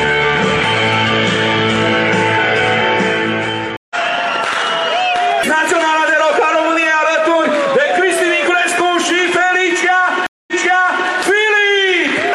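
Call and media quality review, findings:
Stream reconnect at 3.77–3.96 s: 138 ms dropout, audio resumes roughly 150 ms further on, so a short stretch is skipped. Stream reconnect at 10.27–11.08 s: 211 ms dropout, then resumes 604 ms earlier, so audio repeats. Cause: connection loss, fresh decoder started mid-stream, server resending a burst on the second.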